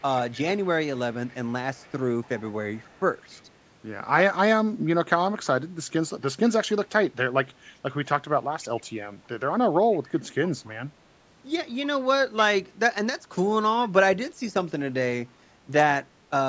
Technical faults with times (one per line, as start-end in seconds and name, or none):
0.00-3.42 echo leak
8.62-8.83 echo leak
9.91-9.99 echo leak
10.44-10.69 echo leak